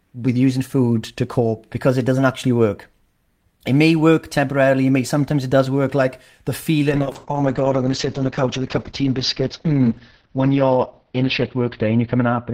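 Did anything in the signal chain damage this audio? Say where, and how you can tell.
Yes, a call bitrate drop at the network and codec stage. From 6.91 s to the end, the speech turns coarse and muffled, consistent with the encoder falling from about 32 to 8 kbps. On a spectrogram, everything above 6 kHz vanishes there.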